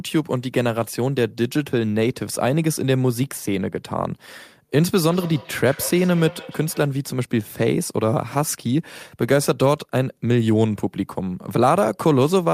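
Feedback echo between two devices runs from 5.04 to 6.99 s. A second device in the room replays the call, and the first microphone captures it again, beyond its own echo canceller's reach. Each word returns roughly every 150 ms, thinner and ringing, peaking about 17 dB below the speech.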